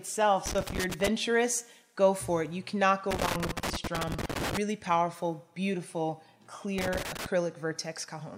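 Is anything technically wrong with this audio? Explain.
Yes. Loose connector crackle appears three times: 0.46 to 1.08 s, 3.11 to 4.57 s, and 6.78 to 7.26 s. A worn or dirty contact is making and breaking. This chops the signal into irregular bursts of scratchy crackle.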